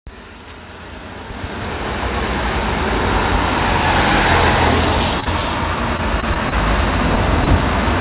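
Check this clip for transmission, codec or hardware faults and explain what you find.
Three kinds of transmission fault are audible, all packet-timing problems on a narrowband call path whose cut-off at 4 kHz fits G.711 mu-law coding.

Short stall from a late packet, 5.20 to 5.24 s and again 5.24 to 5.28 s: two packets arrived late back to back, so the jitter buffer ran dry and the receiver stretched the last sound by about 21 ms and then 16 ms before resuming. Nothing drops out, but the audio hangs briefly with a faint buzz or dip. On a spectrogram this appears as a short run of smeared, repeated frames.

Repeated packet loss (robotic sound), 5.97 to 6.54 s: four separate gaps, the longest 24 ms, were each patched by extending the preceding sound, covering roughly an eighth of the span. The result is choppy, with fragments missing. The waveform shows several small flattened or looped patches in close succession.

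Short concealed packet loss, 7.44 to 7.48 s: about 20 ms never reached the decoder in time, and the gap was bridged by continuing the previous sound and blending back in. It is heard as a quick smear or wobble. On a spectrogram it shows as a thin vertical band of blurred, copied texture.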